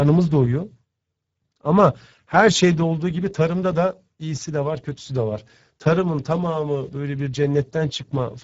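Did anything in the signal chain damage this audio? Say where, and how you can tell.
Yes, at the codec stage: throughout, the speech sounds noisy and hoarse from Speex codec damage, with nothing above 7.7 kHz. The starved excitation fits a bitrate around 10 kbps.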